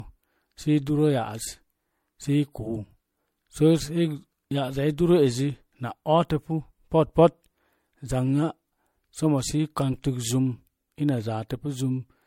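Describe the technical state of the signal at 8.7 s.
At 8.7 s the speech carries the same generation loss heard from start to finish: a swirly, hollow, smeared texture with softened consonant attacks, likely from repeated MP3 encoding, around four passes, at a rate that fits 64 kbit/s. Each re-encode quantises on a shifted frame grid, so noise and gaps accumulate. A spectrogram would show a hard ceiling at 16.5 kHz, patchy holes and blotchy smearing between harmonics, with onsets looking blurred rather than sharp.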